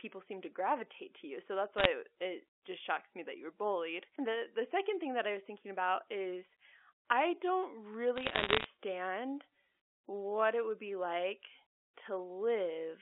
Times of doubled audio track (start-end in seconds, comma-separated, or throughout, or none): none